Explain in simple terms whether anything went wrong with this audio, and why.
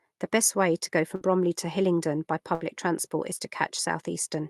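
Two short dropouts at 1.15 to 1.24 s and 2.55 to 2.64 s are a burst of packet loss on the call. Each time, a little of the speech never arrived, so the receiver stretched the last sound and let it fade briefly, then jumped ahead past a missing chunk.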